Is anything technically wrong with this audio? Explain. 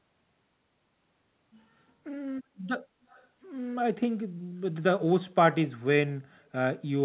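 Yes. Echo leak, 3.09 to 3.27 s: a very faint copy of the speech returns 267 ms late, likely from a loudspeaker whose echo canceller let it through. This is heard over a call path that carries nothing above 4 kHz.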